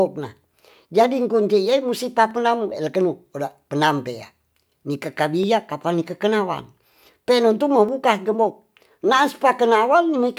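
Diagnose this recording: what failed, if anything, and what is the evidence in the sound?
Dropped samples, likely at the driver or buffer stage, cause single sharp clicks at 2.31 s after "kuncine musti", 5.43 s before "kapan nikekekenawang teilontu", and 7.89 s before "gembok na'as". Each skips a fraction of a millisecond, so the waveform jumps. Unlike a dropout, no audible sound goes missing.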